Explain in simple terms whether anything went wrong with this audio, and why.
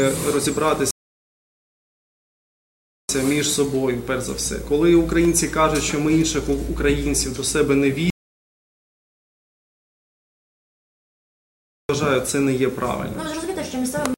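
A rebuffering stall happens between 0.91 and 3.09 s. The sound stops dead and goes silent for about 2.2 seconds, then carries on from exactly the point where it paused. The player had used up all the audio it had downloaded and had to wait for more to arrive before it could continue. Nothing is missing from the recording; the pause just adds about 2.2 seconds of dead air.

An audio dropout to silence runs from 8.10 to 11.89 s. Here the sound cuts out mid-flow and the gap is completely empty, with not even faint background noise, for about 3.8 seconds. When it returns, it picks up later rather than where it left off, so that stretch of audio is gone for good. The likely cause is that the input signal was briefly lost, for example through a loose connection or an accidental mute, while the recording kept writing silence.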